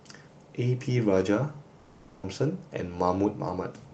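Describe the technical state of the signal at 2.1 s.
At 2.1 s the speech is gone, replaced by a buzzy, hiss-like continuation of the preceding sound that fades toward low steady noise, from 1.79 s to 2.26 s. This is likely a long network dropout: packets stopped arriving and the receiver synthesised filler until audio resumed.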